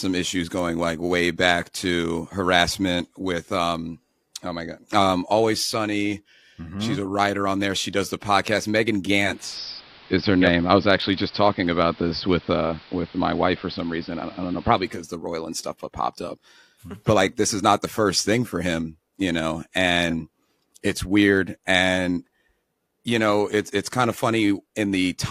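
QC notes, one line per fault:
9.14–15.12 s, digital radio blending to analogue: speech cross-fades over 447 ms to the AM feed, cutting treble, shifting level about 3 dB, adding hiss roughly 25 dB down.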